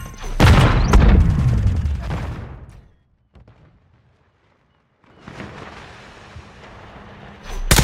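From 1.72 to 2.97 s there's zipper noise: the level drops around 25 dB in 2 dB jumps, roughly ten a second, each one ticking audibly.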